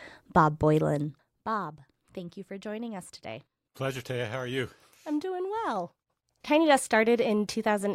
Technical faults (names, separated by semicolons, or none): zipper noise